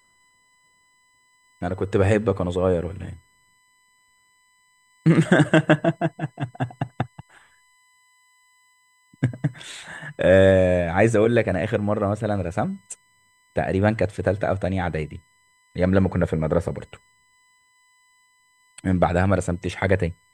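Current drawn by the USB bus in its 1 ms frames is leaking into the audio path through shared power or ground, and it produces USB whine across the whole speech clip. The interference sits at a fixed 1 kHz with a harmonic series above it, the 2 kHz component being strongest, so the whine has a thin, steady, electronic edge. It runs roughly 40 dB under the speech, most exposed in the pauses between phrases.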